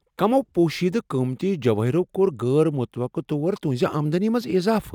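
A resampler restarted on every block runs throughout this speech clip, ticking about every 50 ms, a 20 Hz pattern present only while sound is playing. Each block was converted alone, likely from 44.1 kHz to 48 kHz, leaving small errors at every block edge.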